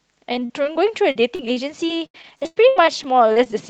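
From 0.33 to 3.54 s there's repeated packet loss, with holes up to 98 ms patched by stretching the last sound, so the speech goes choppy and robotic.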